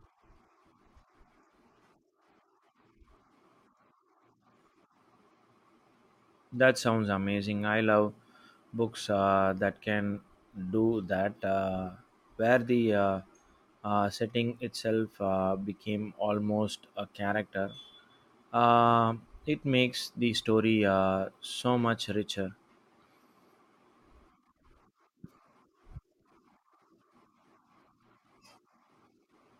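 Nothing in the recording stood out as a technical fault on listening.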